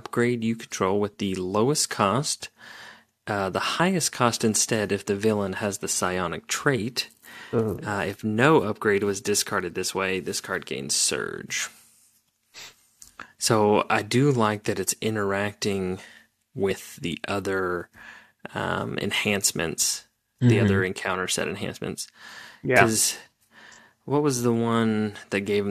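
At 3.79 s the speech jumps ahead just before "highest cost instead if". Compressed frames were skipped there: a chunk of roughly 20 ms never got decoded, which fits one lost frame of about 23.2 ms. Because neighbouring frames overlap, the join comes out as a quick smeared blip, not a sharp click. The same thing happens at 16.70 s before "the other", this time a bigger gap of around 50 ms, about two frames' worth.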